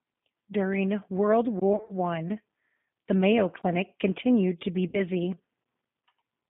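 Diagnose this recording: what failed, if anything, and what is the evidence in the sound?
Codec stage: the whole clip is band-limited to roughly 150 Hz to 3.6 kHz, with plainly audible rough, synthetic texture, which fits G.729 at 8 kbit/s.

Network stage: VoIP packet loss concealed by the speech codec at 1.73–1.93 s and 4.88–5.00 s, just after "continued to be". The decoder stretches the last sound into fading buzz or coloured noise that recovers slowly.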